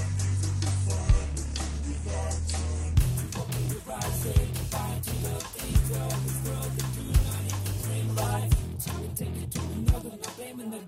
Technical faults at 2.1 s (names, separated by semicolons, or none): section at the wrong speed